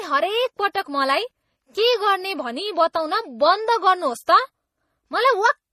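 Throughout the speech, the sound carries two layers of compression damage at once: a papery, swirling smeariness alongside a crisper metallic warble. That mix most likely comes from transcoding between lossy codecs, with a low-rate HE-AAC stage re-encoded to MP3, each pass spending bits on the previous artefacts. On a spectrogram, energy stops flat at 14.8 kHz, with blotchy, patchy high-frequency texture below it.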